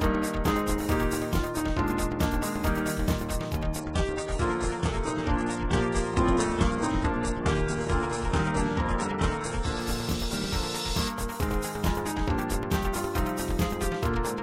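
From 3.8 to 9.8 s the stream drops to a lower bitrate. The top end suddenly thins, with nothing above about 11 kHz, which points to a switch from 96 kbit/s AAC-LC to a very low-rate HE-AAC rendition after the connection slowed. The return at 9.8 s is just as abrupt. Unlike a network dropout, there is no gap or stutter. Unlike a plain low-pass filter, codec artefacts rise along with the lost treble.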